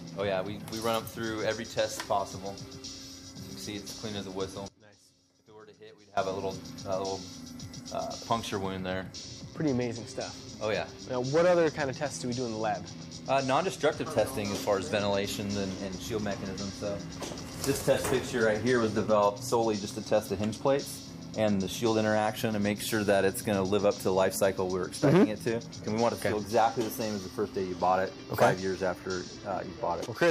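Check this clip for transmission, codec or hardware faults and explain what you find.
There's one fault. From 4.68 to 6.17 s the sound drops by about 22 dB, likely one channel inverted, so the shared content cancels in the mono sum.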